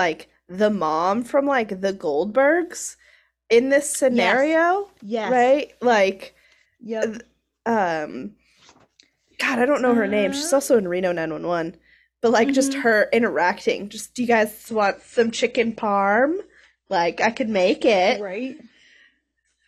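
At 14.68 s the speech drops abruptly to an adaptive stream at a lower bitrate, and stays there until the clip ends at 19.68 s. The player switched to a cheaper encoding when throughput fell, so the treble vanishes above 9 kHz and the sound turns duller and more smeared, consistent with a step from roughly 96 to 32 kbit/s AAC. Unlike a dropout or buffering stall, there is no gap or stutter, only a sudden, sustained change in quality.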